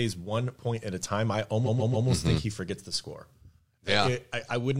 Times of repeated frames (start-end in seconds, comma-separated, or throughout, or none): 1.65-2.07